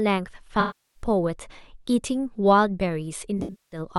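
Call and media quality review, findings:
AAC frame loss with concealment at 0.60–1.02 s and 3.38–3.79 s (scattered, longest run around a fifth of a second): the decoder fills the gaps from the last good spectrum, heard as smeared, phasey patches. On a spectrogram, flat, blurred frames; in the waveform, a fading envelope.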